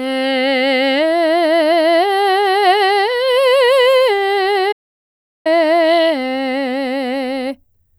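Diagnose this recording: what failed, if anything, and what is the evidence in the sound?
The music cuts out at 4.72 s and stays silent until 5.47 s, a gap of about 0.73 s. This is a playback stall at the playback stage. The silence is abrupt, with no fade or decay into it, and the music returns just as suddenly. The likely cause is that the player ran short of data, or its audio thread was blocked, so nothing reached the output until it recovered.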